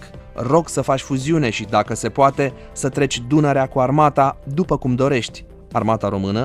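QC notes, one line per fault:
No fault to note.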